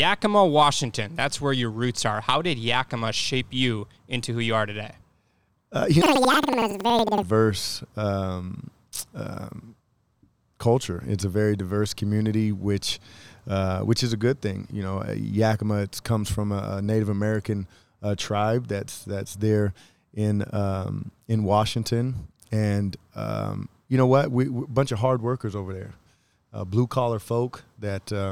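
From 6.02 to 7.28 s, planar audio is read as interleaved. Each 93 ms block plays twice at double speed. Speech jumps an octave, fluttering at 10.8 Hz.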